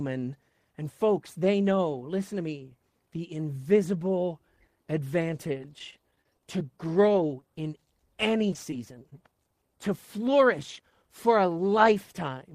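From 5.43 to 7.42 s there are scattered short gaps: around fifteen tiny holes where packets went missing or arrived late, each patched by stretching the preceding sound. You hear brief ticks and little smears, with roughly 110 ms lost and 22 ms added along the way.

Then from 8.51 to 9.12 s it turns into repeated packet loss with a robotic sound. Five holes, the longest 13 ms, come close together, and about 50 ms is filled in. Those back-to-back patches make the speech choppy.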